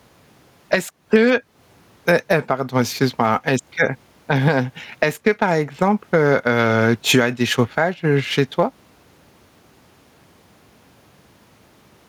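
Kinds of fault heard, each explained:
Gain pumping: The gain is pulled down on loud sounds all through the clip. The swing is large, around 15 dB. Loud and quiet passages sit close together in level, so the speech sounds squashed and flat. The likely cause is input gain set far too high, with a fast limiter or compressor clamping down on every loud syllable.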